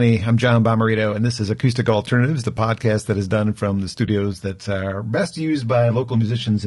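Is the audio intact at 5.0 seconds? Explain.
No. From 4.29 s, right after "is done from the", until the end, one channel runs about 10 ms late and the two are summed to mono, so shared content cancels at evenly spaced notches starting near 50 Hz. That channel delay produces comb filtering that makes the sound hollow and phasey. Throughout the clip, the speech is also rough and grainy, with noise between the harmonics and a synthetic-sounding top band. This is likely low-delay AAC compression (AAC-ELD) at a low bitrate, consistent with around 32 kbps.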